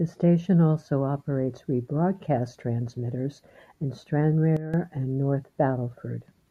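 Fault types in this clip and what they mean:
Sudden gain jump: from 4.57 to 4.74 s the speech and its background noise drop together by about 12 dB in one step, then return. This is likely a gain setting applied without a ramp. Unlike a fade or dropout, nothing tapers and sound continues.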